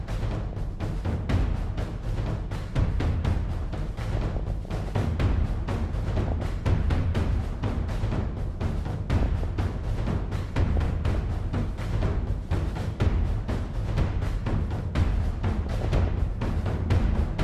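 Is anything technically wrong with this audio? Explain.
Yes. DAB burbling occurs at 0.48–0.74, 4.12–5.05, 5.99–6.45, 9.13–9.44, 10.75–11.15 and 15.66–16.08 s. Weak reception lets a small fraction of bit errors slip past error correction. Corrupted samples put short noisy blips into single sub-bands, and corrupted scale factors make sub-bands jump in level for up to a frame.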